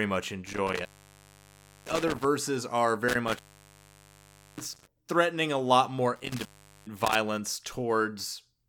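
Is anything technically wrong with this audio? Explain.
Yes. The speech keeps dropping out with crackle at the edges and hiss in the gaps: at 0.46 to 2.25 s (open about 1.01 s), 3.08 to 4.87 s (about 1.19 s, just before "threatening a lot more"), and 6.16 to 7.15 s (about 0.41 s, after it). This is intermittent contact, a loose cable or plug briefly breaking the connection.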